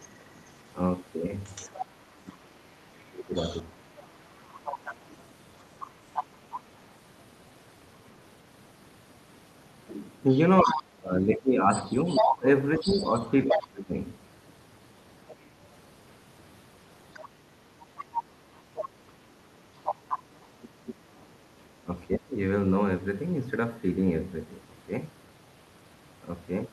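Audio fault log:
0.0–6.59 s, other side's voice leaking through: a second voice sits about 15 dB under the speech, likely loudspeaker echo the canceller failed to remove from the microphone.
2.03–4.6 s, speech suppressed in double talk: the talker dips by as much as about 30 dB for around two seconds in total, likely the canceller muting both voices while they overlap.
10.31–13.67 s, other side's voice leaking through: the leaked voice is about as loud as the talker, likely echo passing almost unreduced from loudspeaker to microphone.
10.64–13.94 s, speech suppressed in double talk: the talker drops by up to about 25 dB for around two seconds in total, likely suppression triggered because the two voices overlap.
15.3–15.42 s, other side's voice leaking through: a brief scrap of the other voice, about 25 dB below the speech, likely residual echo the canceller missed.
17.13–20.94 s, other side's voice leaking through: the second voice runs only about 5 dB under the talker, likely loudspeaker echo left in the microphone signal.
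21.85–22.37 s, speech suppressed in double talk: the talker falls by up to about 25 dB for roughly a third of a second, likely the canceller suppressing both voices together.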